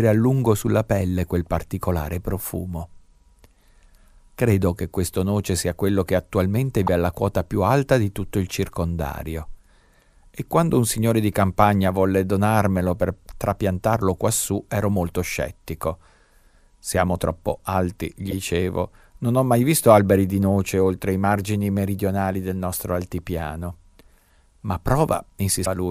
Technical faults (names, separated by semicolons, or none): broken MP3 bit reservoir